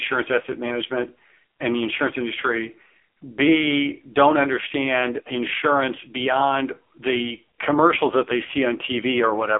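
From start to finish the speech carries the AMR narrowband mobile codec sound. Nothing passes above 3.6 kHz, the band sits near 300 Hz to 3.5 kHz, and heavy coding damage makes the voice buzzy and synthetic, which fits AMR-NB at roughly 5.9 kbps.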